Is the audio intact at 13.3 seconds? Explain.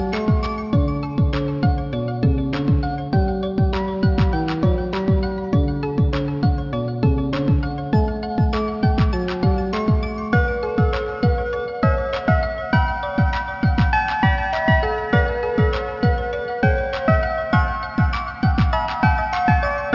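No. Aliasing is present at 13.3 seconds, as it is throughout the clip. The sound fits a drop from 44.1 kHz to about 12 kHz with no low-pass filtering beforehand. Content above the 6 kHz fold point reflects back below it, landing at unrelated pitches. Bright, hissy and metallic elements turn gritty and harsh, the spectrum stays full right up to the band edge, and the folded energy sits roughly 30 dB below the main signal.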